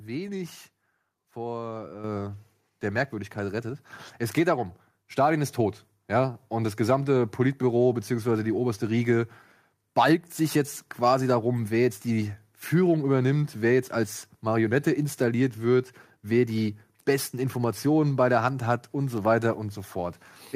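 At about 2.04 s the microphone volume steps up: everything jumps by about 7 dB at once, the voice and the room noise behind it together. That's the call software deciding the input was too quiet and raising the device's input gain in a single step rather than easing it up. Because the background lifts along with the speech, it doesn't sound like someone speaking louder. It's an abrupt level change applied to the whole signal.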